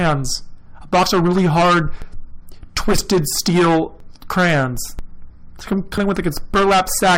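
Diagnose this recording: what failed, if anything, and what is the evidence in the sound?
Hard clipping runs through the whole speech clip. The level stage, most likely the converter or a sample-format conversion, was driven about 15 dB past full scale, so roughly a tenth of all samples hit the ceiling. Every louder syllable turns to harsh fuzz. On the waveform, peaks are sliced into flat plateaus at the same level. On the spectrogram, loud passages spread dense harmonic energy up into the top kHz range, far above the voice's natural content.

Overlap between stream segments shows up at the network or playback stage as tiny skips at 2.02 s (after "of really hard"), 4.00 s, 4.99 s (after "steel crayons") and 5.98 s (after "like I'm"). The spacing fits one-second segments whose time stamps overlapped, so the player trimmed about 5 ms of genuine audio at each join. The waveform shows a sudden discontinuity at each point, and the spectrogram shows a thin vertical broadband line.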